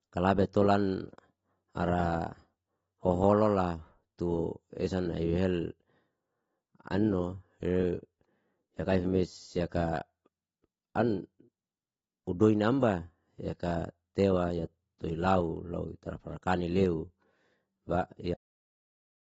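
AAC compression runs through the whole of this speech recording: the codec damage is plainly audible from start to finish, and nothing is present above about 7.7 kHz. The likely cause is AAC-LC coding at a low rate, around 24 kbps. At that rate the encoder spends its few bits on the parts a hearing model treats as most important. It pulls the upper band limit down and thins out or substitutes the remaining detail in the spectrum. The cut-off end comes at 18.34 s. The speech stops partway through a sound and the last 0.9 s or so to the end is silence, with no natural decay. That abrupt halt shows the final stretch of audio was never written out, so playback simply runs off the end of what was captured.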